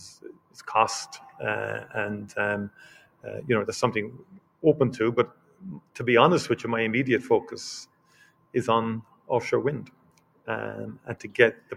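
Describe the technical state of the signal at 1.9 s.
At 1.9 s you're right at the tail of a stretch, from 0.13 to 1.94 s, where the noise suppressor cut the sound, mistaking it for noise and pulling it down as much as about 17 dB. Sustained and decaying parts sink or get clipped short, while sharper onsets mostly poke through.

Underneath that, a noise suppressor built for speech is running on non-speech sound the whole way, treating steady tones, ambience and reverb as noise. Its gain swings by roughly 20 dB, so the sound pumps and thins as tails get pulled away.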